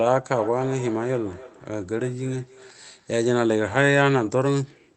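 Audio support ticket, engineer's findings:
Feedback echo between two devices, 0.3–3.21 s: second device in the room plays the far end, its microphone re-captures it, and the local echo canceller can't remove playback from another device. Speech returns roughly every 300 ms, thinner and ringing, about 18 dB below speech at its loudest.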